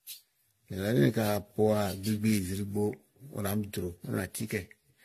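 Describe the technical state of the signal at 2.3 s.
At 2.3 s the speech sounds swirly, smeared and hollow, with blurred consonant attacks and nothing above 14 kHz, and this persists through the whole clip. The likely cause is generation loss: repeated AAC-style encoding, perhaps around seven passes near 64 kbit/s, each requantising on a shifted frame grid so that noise and spectral holes accumulate.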